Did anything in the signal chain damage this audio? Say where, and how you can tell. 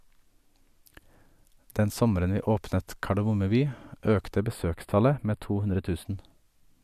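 Yes. From 4.40 to 6.05 s, one channel of the speech ran a few samples late, under a tenth of a millisecond, before the mix-down to mono. This channel delay (comb filtering) cancels shared content at fixed notches, the first around 7 kHz, leaving a hollow, phasey top.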